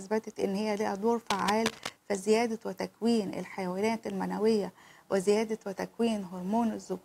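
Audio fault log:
1.30–1.90 s, cable scratch noise. Dense, uneven crackling and rustling rides over the sound for 0.6 s. It is only a little quieter than the sound itself. The likely cause is a worn cable or connector shifting. Its contact resistance jumps rapidly.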